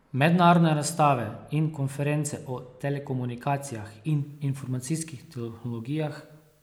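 From 4.20 s onward, an even, undistorted hiss sits about 40 dB below the speech: low bit depth with dither, 10-bit rounding turned into noise.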